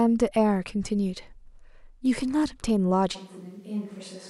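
Switch to a distant microphone at 3.17 s, lasting to the end: the speech turns suddenly roomy and thin, drops about 10 dB, and gains room noise, likely from a farther microphone replacing the close one.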